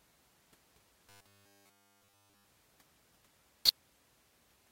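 From 1.10 to 2.45 s the speech turns into robotic sound from repeated short buffers: a rigid, metallic buzz at 100 Hz. This likely comes from a 10 ms chunk being replayed over essentially the whole span while fresh audio failed to arrive.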